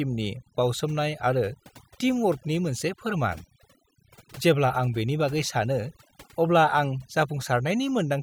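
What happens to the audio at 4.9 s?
At 4.9 s the speech carries a mains buzz, present from start to end of the clip. Sharp switching spikes from the power supply get into the signal twice in each 60 Hz cycle. Their harmonics stack up from 60 Hz well into the kilohertz range. The result is a steady, raspy buzz, sitting roughly 25 dB under the speech. It does not rise or fall with the talking.

Overdone noise removal is also heard at that moment, and it too runs through the whole clip. A noise reduction stage was pushed too hard. It cuts individual frequency bands far down or out whenever they come close to its noise estimate. Quiet parts of the speech fall below that line and vanish with the noise. Pauses sink toward silence, broken by twinkling specks.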